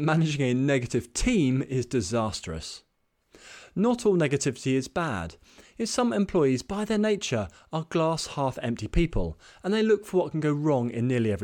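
A spoken recording with no technical faults to point to. There is nothing here that needs a time stamp or a cause.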